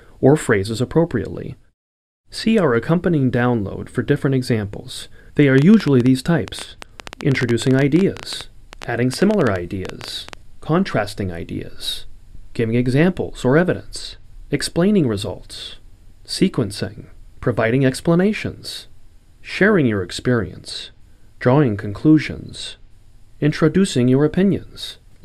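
From 5.58 to 10.34 s a train of clicks ticks over the sound, about fifty at roughly 10.5 per second, unevenly spaced, peaking about 10 dB above the signal. It is likely interference pulses, showing as sharp waveform spikes and thin vertical broadband lines on a spectrogram.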